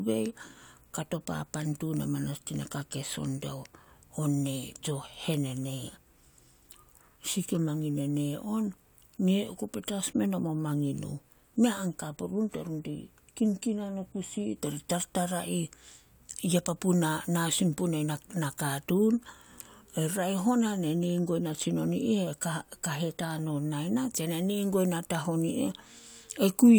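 No technical faults are audible.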